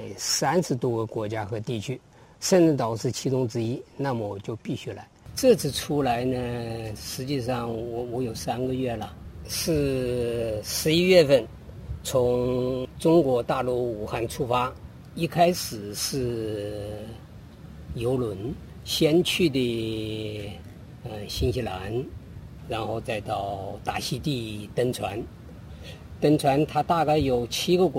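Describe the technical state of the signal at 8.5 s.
At 8.5 s, like everywhere else in the clip, there's sample clock jitter: a wobbly converter clock, around a few microseconds, adds hiss that swells on loud, bright passages.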